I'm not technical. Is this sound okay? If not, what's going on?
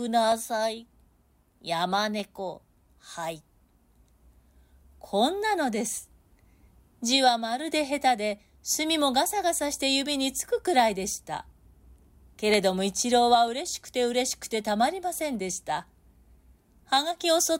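No, there's a small problem. From about 0.32 s to 17.23 s you get a regular click roughly every 0.94 s, around twenty in all. That steady rhythm is most likely clock drift buffer slips: two pieces of equipment keeping slightly different time, off by something like 200 parts per million. The gap builds up until a handful of samples gets skipped or doubled, and each jump makes a click.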